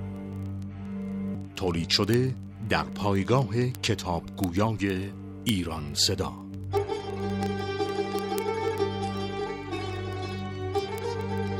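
From 0.13 s to 11.57 s a dense train of word clock ticks runs under the sound, several hundred in all, arriving about every 30 ms. The receiving device was free-running rather than locked to the sender, with the two clocks roughly 700 ppm apart, so each slip drops or repeats a single sample. Unlike random clicks or crackle, these fall at a fixed rate, sharp but uneven in strength.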